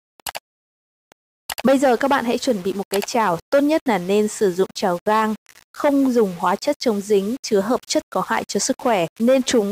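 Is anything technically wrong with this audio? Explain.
Yes. Throughout the clip, grainy distortion tracks the sound, which points to low bit depth without dither, likely about 6 bits with plain rounding. The error follows the signal at roughly 25 dB below it, so quiet passages turn gritty and the faintest sputter or vanish.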